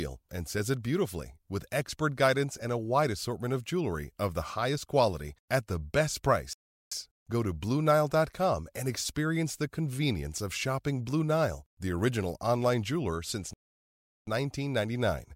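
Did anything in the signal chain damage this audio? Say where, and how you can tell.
Yes, two playback stalls: speech cuts to silence after "quality at the best" at 6.53 s for 0.38 s, and after "original online jeweler since" at 13.53 s for 0.74 s. That's likely the player running dry, then resuming.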